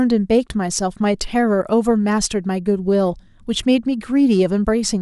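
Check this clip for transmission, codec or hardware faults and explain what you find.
Nothing here calls for attention, so there's nothing to flag in this bit of speech.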